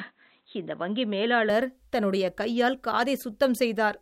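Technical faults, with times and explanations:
0.0–1.5 s, input switched to a poorer device: The opening speech is dull and boxy, with nothing above 4.1 kHz. At 1.5 s, just before "தன்னுடைய கையால்", the full bandwidth returns with no gap. Loudness barely changes. The dull stretch carries its own faint background noise, far below the speech. The likely cause is the recording starting on a narrower-band input, such as a headset's call profile, before switching to the main microphone.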